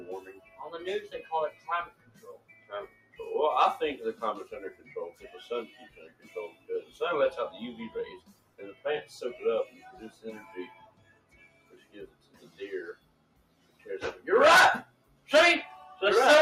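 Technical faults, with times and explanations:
Throughout: noise suppressor applied to music or sounds. A suppressor built for speech stays active and treats steady tones, ambience and reverb as noise, so its gain swings by around 20 dB. Onsets mostly pass while sustained parts and tails are pulled down, giving pumping, fluttering or thinning. Unlike a compressor, the loss follows how steady or noise-like the sound is, not how loud it is.
0.38–0.59 s, 1.52–3.18 s, 4.75–5.23 s, 5.89–6.96 s, 8.2–8.85 s, 9.7–13.86 s, 14.85–15.28 s: sound cut by the noise suppressor. In these stretches the suppressor mistakes the sound itself for noise and turns it down beyond the general swing, by about 7 dB at 0.38 s, about 9 dB at 4.75 s and about 13 dB at its deepest in the other five. Held or decaying parts sink or end early while sudden sounds get through, which sets these apart from dropouts or gaps.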